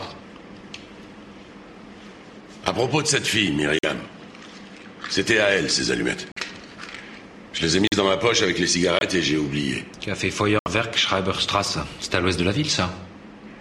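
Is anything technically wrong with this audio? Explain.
Yes. Corrupt frame muted occurs at 3.79, 6.32, 7.87, 8.99 and 10.59 s. Damaged compressed frames were rejected by the decoder and replaced with silence, so the sound drops out abruptly for 36 to 90 ms. These lengths fit the loss of one to three frames of roughly 30 ms each. Timing stays intact after each gap.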